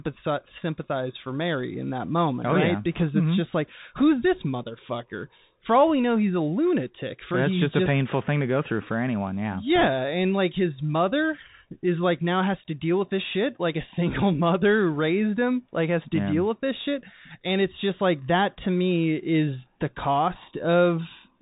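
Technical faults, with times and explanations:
Throughout, Bluetooth CVSD headset codec: the speech sounds narrow and boxy with nothing above 4 kHz, s sounds come out scratchy, and a grainy hiss sits underneath. The codec sends one up-or-down bit per sample at 64 kbps with an adapting step, which loud high sounds outrun.
2.92 to 3.03 s and 9.76 to 9.88 s, bit errors on a Bluetooth voice link: brief bursts of rushing, crackly noise, each about a tenth of a second, with no sharp clicks. Roughly 1.5 percent of bits were flipped, and since each bit carries little weight and errors fade, the damage spreads as noise.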